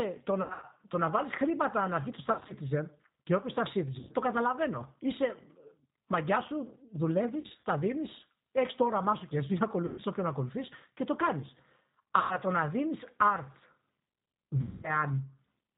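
Throughout, the speech passes through the G.729 codec at 8 kbit/s, which rebuilds each 10 ms frame from a vocal tract filter, a pitch predictor and a handful of pulses. Nothing above 4 kHz survives, and the codec damage is plainly audible as a rough, synthetic, band-limited tone.

VoIP packet loss concealed by the speech codec occurs at 0.42–0.65 s, 2.33–2.53 s, 3.99–4.12 s, 7.41–7.64 s, 9.86–10.02 s, 12.19–12.37 s and 14.61–14.93 s. The decoder extrapolates from its last pitch and filter while fading the gain, so about 100 to 220 ms of audio goes missing each time. The scattered losses at 0.42, 2.33 and 7.41 s have runs of up to 80 ms. Each gap becomes a fading smear, and the speech stays weakened briefly after packets resume.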